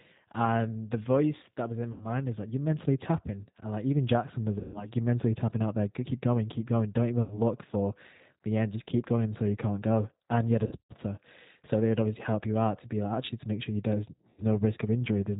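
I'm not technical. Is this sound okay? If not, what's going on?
No. The call was squeezed through the G.729 codec, a phone-call compressor that rebuilds the voice from a simplified model and drops everything above 4 kHz. That leaves the speech understandable but dull, slightly rough and a little robotic throughout.

There is also VoIP packet loss concealed by the speech codec: small chunks of the call went missing, and the decoder stretched out the last bit of sound to fill each gap. You hear brief buzzy, smeared or fading moments at about 1.9 s, 4.6 s (just before "you're mentally tapping out"), 7.2 s (just before "for the end"), 10.7 s (right after "you had a") and 14.3 s, with the voice sounding weak for a moment afterwards.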